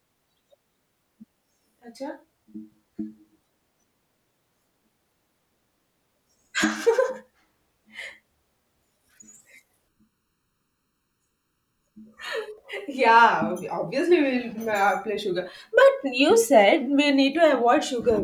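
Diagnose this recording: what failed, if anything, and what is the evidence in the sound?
Channel delay (comb filtering) at the driver or buffer stage, from 9.88 to 12.58 s. The speech turns hollow and phasey, with fixed notches beginning near 700 Hz. One channel lags by under a millisecond, so the mono sum cancels at evenly spaced frequencies.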